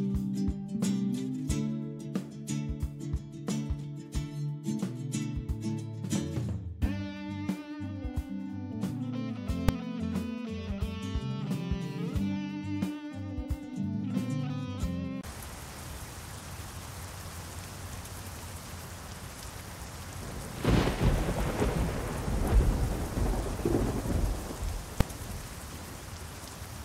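At 9.69 s and again at 25.01 s a single sharp bang cuts through the sound. Each is invalid numbers at full scale: a calculation yielded infinite or invalid values that were clamped to maximum level for one short block, about 2.9 ms, which fits a 128-sample block.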